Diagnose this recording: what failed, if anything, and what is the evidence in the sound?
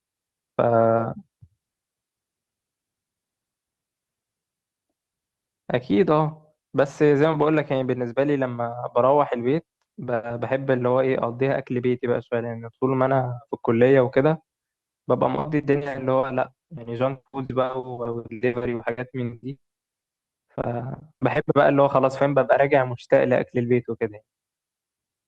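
Repeated packet loss (robotic sound) at the network stage: from 15.35 to 21.37 s packets kept vanishing or arriving late. Each hole was filled by extending the last sound, so 1.58 s, about a quarter of that stretch, is patched in gaps up to 100 ms, sounding choppy with pieces missing.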